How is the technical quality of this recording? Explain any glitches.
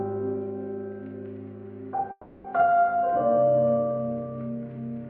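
There's one glitch worth flagging: a call audio freeze from about 2.11 to 2.59 s. The sound stalls and the last bit gets stretched into a buzzy, hissy smear that fades rather than dropping to silence. When it picks back up, it carries on right where it left off, so nothing's lost, but everything after runs roughly a third of a second late. Likely cause: packets got held up in transit and the jitter buffer ran dry, so the receiver padded the wait.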